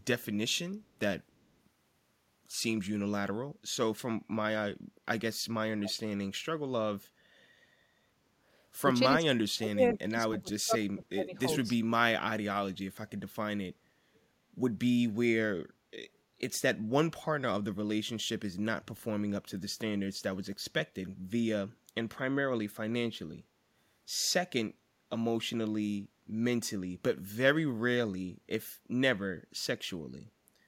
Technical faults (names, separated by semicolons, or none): speech suppressed in double talk; echo leak